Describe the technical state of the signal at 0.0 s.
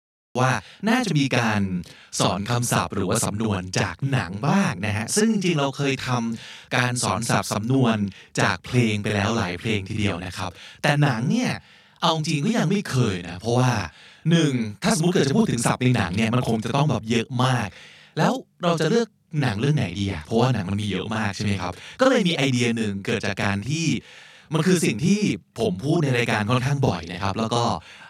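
The recording began late, so a cut-off start leaves digital silence from 0.0 to 0.35 s before the speech enters abruptly mid-sound at 0.35 s, with no natural attack. Throughout, one channel runs 40 ms behind the other and both are summed to mono, so this channel delay (doubling) adds an equal-level slap copy behind every sound.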